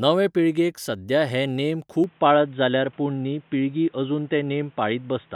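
At 2.04 s the input likely switched to a poorer device, one that passes nothing above 3.8 kHz. From there to the end the speech turns dull and boxy, with a faint new background noise, no gap at the switch and little change in level.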